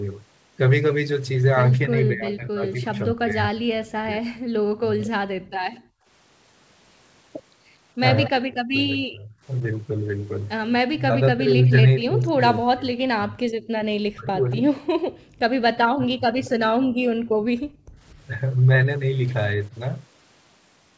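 From 1.87 to 5.11 s the talker's speech dips, thins and breaks into pieces, falling by around 35 dB and losing about two seconds in all. This is speech suppressed in double talk, likely because the echo canceller mistook overlapping talk for loudspeaker echo and ducked both. The same fault returns from 8.27 to 16.4 s, with about three seconds affected.

From 5.31 to 6.06 s the room sound drops sharply, by about 40 dB, for roughly half a second before returning. This is background gated by the echo canceller, which clamps the microphone while the loudspeaker plays. It happens again between 13.68 and 18.0 s, for about a second in total.

Short, faint copies of speech arrive 236 ms late at 5.75 to 5.79 s (about 35 dB below the speech), 8.26 to 8.3 s (about 20 dB down), 14.51 to 14.81 s (about 25 dB down) and 16.45 to 16.5 s (about 20 dB down). This is echo leak, likely loudspeaker sound that the loudspeaker side's canceller failed to remove and sent back.

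The band ends at 8 kHz, which fits a G.722 call path at 64 kbps.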